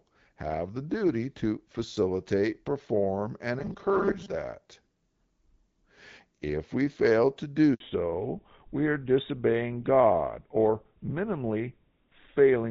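A speech recording in which, from 3.59 to 4.34 s, just after "to facilitate perform and", the voice hardens into a rigid metallic buzz near 200 Hz that still loosely tracks the words. This is likely robotic sound from repeated short buffers: audio arrived too late and roughly half of it was replaced by loops of the last snippet, consistent with a 5 ms buffer whose repetition rate sets that buzz. After "we fail to", the voice drops out from 7.74 to 7.80 s, a 60 ms handover gap while the call switched networks and no speech frames reached the receiver. From 7.80 s to the end, the voice turns duller and rougher with nothing above 4 kHz, a fallback to narrowband. The sound fits a move from AMR-WB HD Voice at 12.65 kbit/s, which is lightly coded and clear before this point, to the older GSM full-rate codec at 13 kbit/s.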